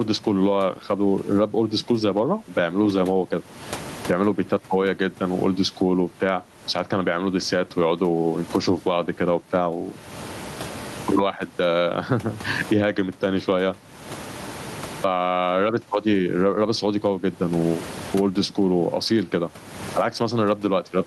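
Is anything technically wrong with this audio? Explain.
Yes. Gain pumping runs through the whole speech clip. The room noise sits about 33 dB below the speech. The swing is around 25 dB. The likely cause is input gain set far too high, with a fast limiter yanking it back on every loud syllable. That squashes loud and soft into a flat, squashed sound. On a waveform the peaks look evened out in level.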